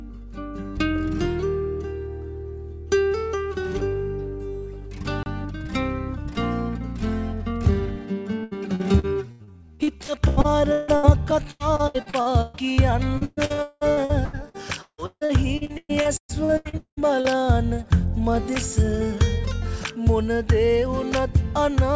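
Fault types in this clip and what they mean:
Block of digital silence: the audio drops straight to silence and returns with no fade. The 30 ms hole at 5.23 s is a short dropout, and the 2.6 ms one at 11.31 s is just a tick. Nothing fills the gap.
Repeated packet loss (robotic sound): audio keeps going missing, and each hole is patched by stretching the last sound. This gives choppy stretches with pieces missing at 8.44–11.06, 11.51–12.81 and 13.18–17.32 s, with gaps up to 198 ms. Unlike silence, these holes are filled, not blank.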